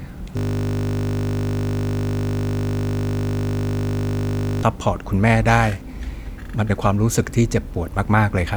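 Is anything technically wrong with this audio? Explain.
Yes, there's a system hang loop from about 0.37 s to 4.63 s in this speech clip. The machine or its audio driver stalled while the sound hardware kept replaying the same 20 ms chunk of its ring buffer, over two hundred times straight. A buffer that short cycles 50 times a second, so the speech turns into a steady 50 Hz buzz for over four seconds instead of a stutter, before normal playback picks back up.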